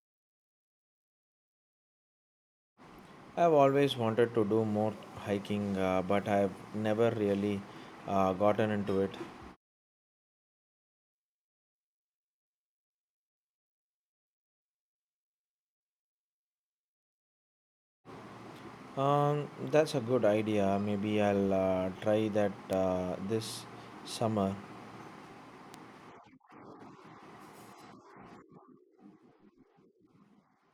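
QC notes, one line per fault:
22.73 s and 25.74 s, bit error spikes. Each is a single sharp tick, lasting only a couple of samples, then gone. The first peaks at about -20 dBFS, the second at about -26 dBFS. A flipped bit in memory or on a digital link makes the sample value jump by a power of two and snap straight back. That near-instant step has energy at every frequency. So it sounds like a bright click with no relation to the speech around it.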